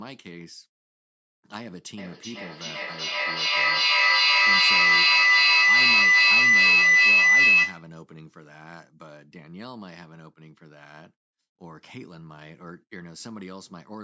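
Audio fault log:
1.98 to 7.92 s, feedback howl: a shrill tone of around 2 kHz swells to about 21 dB above the speech, with the loop coming round roughly every 400 ms as the sound circles between loudspeaker and microphone, gaining level on each trip and narrowing to the pitch the loop favours. Unlike an ordinary echo, whose repeats fade and keep the sound's character, these grow into a single sustained tone that persists until the loop is broken.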